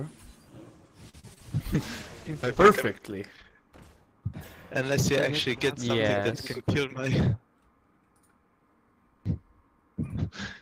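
Repeated packet loss (robotic sound) runs from 1.09 to 1.42 s. Four gaps open in quick succession, the longest 42 ms, and each is bridged by extending the preceding sound, so about a third of the stretch is concealment. It comes across as choppy.

A call bitrate drop follows from 1.75 to 4.84 s. The coarser coding and loss of upper frequencies fit the encoder being throttled from about 32 kbps down to 13 kbps, held at the bottom for roughly 1.8 s. The sound turns rough and muffled before recovering.

A jitter buffer speed-up affects 6.54 to 7.04 s. To shed excess buffered delay, the receiver cuts out short pitch-period slices repeatedly, removing around 50 ms in total. Playback runs about 9% fast with unchanged pitch, sounding briefly hurried.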